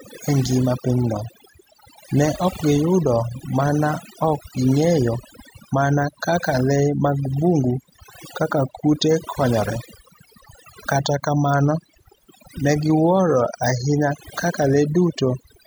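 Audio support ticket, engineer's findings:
Overdone noise removal, throughout the speech. Noise reduction stage set too aggressive: bands falling near its noise estimate pulled far down or gated off frame by frame. Background drops and breaks up into twinkling specks, residual musical-noise bursts. Low-level speech detail removed with the noise. Probable component: denoiser in capture or post chain. Back off reduction depth, re-check.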